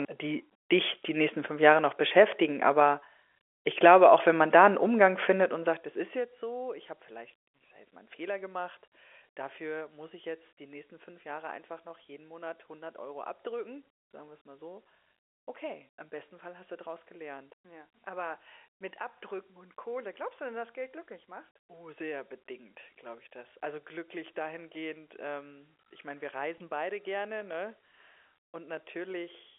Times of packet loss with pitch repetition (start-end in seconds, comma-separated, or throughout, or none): 26.58-26.60